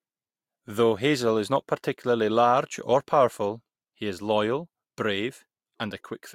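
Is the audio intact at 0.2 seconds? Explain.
Yes, at 0.2 seconds the speech is intact, with no fault of any kind at that moment.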